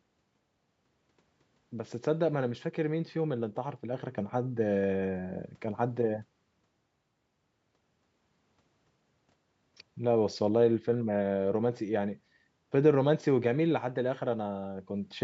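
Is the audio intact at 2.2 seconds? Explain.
Yes, the speech at 2.2 seconds is intact, with nothing there beyond the ordinary band limit of call microphone processing, which leaves nothing above 8 kHz.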